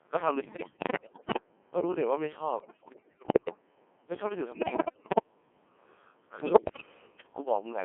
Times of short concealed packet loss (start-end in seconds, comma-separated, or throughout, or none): none